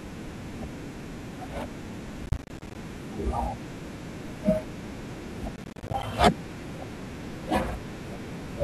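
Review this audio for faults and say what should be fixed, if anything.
The processor fell behind on its short audio buffers, which fits buffers of around 10 ms, missing dozens of deadlines in a row. Each miss drops a sliver of silence, so the speech breaks into gritty processor overload crackle from 2.23 to 2.75 s and from 5.56 to 6.03 s. Reduce the processing load or use larger buffers so every deadline is met.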